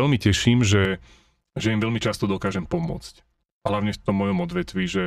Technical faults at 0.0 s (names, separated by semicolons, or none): none